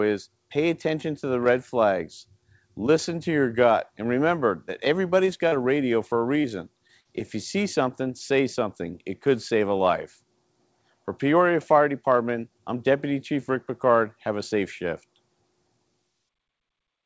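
Brief smears and wobbles break the sound at 5.26–5.30 s, 5.48–5.54 s, 6.42–6.46 s, 6.88–6.91 s and 7.01–7.07 s, where a short onset can drop out. This is short concealed packet loss: 20 to 40 ms of audio arrived too late, and the receiver covered each gap by extending the preceding sound before blending back. The call path caps everything at 8 kHz, which fits G.722.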